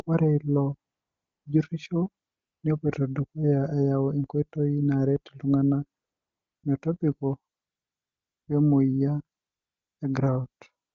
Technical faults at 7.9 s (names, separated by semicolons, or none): AMR comfort noise